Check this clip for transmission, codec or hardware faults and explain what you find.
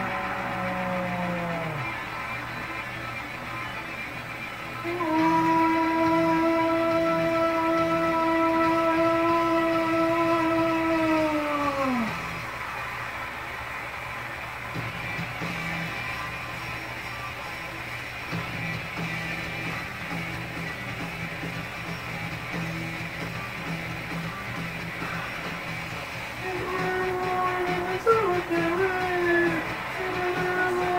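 I found no faults in this clip.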